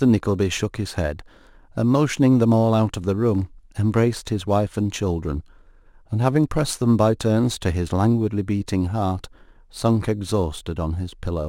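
Throughout the speech there is crude rate conversion, done by picking the nearest sample with no filtering, which fits a 48 kHz to 44.1 kHz change. The periodic timing error adds an inharmonic, gritty fizz roughly 30 dB below the speech, strongest on loud and sibilant sounds.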